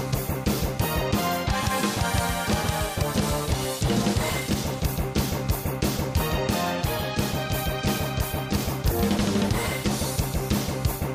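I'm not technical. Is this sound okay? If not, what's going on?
Yes, nothing in this recording points to a technical problem with how the sound was captured, processed or delivered.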